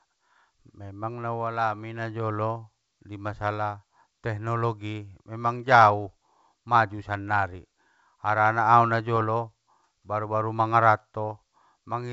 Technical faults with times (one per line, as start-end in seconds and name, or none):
9.16-9.23 bit errors on an ADPCM link